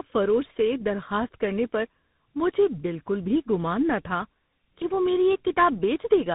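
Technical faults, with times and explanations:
Throughout, tandem speech coding: the speech passed through two speech coders in a row, sounding like GSM full rate followed by CVSD. The second coder re-encodes the first one's degraded output, so the result is rougher and noisier than either alone, with nothing above 3.8 kHz.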